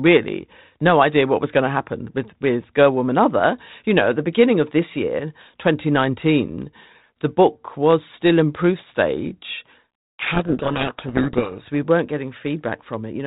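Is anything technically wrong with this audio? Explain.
Yes. From 10.19 to 11.63 s, right after "still in proof stage", the speech is buried under harsh, grinding distortion: a codec payload misread. The line uses G.726 at 32 kbit/s, and for this stretch the decoder takes each G.726 code word with its bits in reversed order, so the sample differences it rebuilds are wrong. Unlike the steady, level-following rasp of G.726 at a low bitrate, this starts and stops abruptly and swamps the speech rather than riding beneath it.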